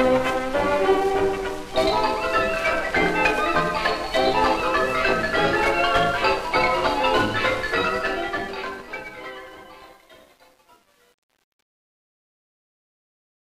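Truncation distortion on a fade runs from 7.73 s to the end. Undithered coarse steps, consistent with roughly 9-bit resolution, make the fade-out gritty from 8.73 s.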